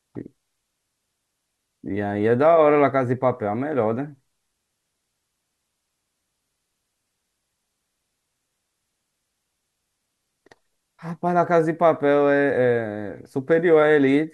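No technical faults are audible.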